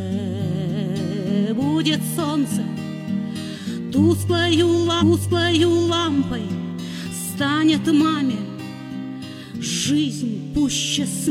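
At 4.97 s the sound jumps back and replays about a second of what came before, running to 5.99 s, with a small blip at the jump. This is a stream segment repeated: the player delivered the same chunk twice, lengthening playback by 1.02 s.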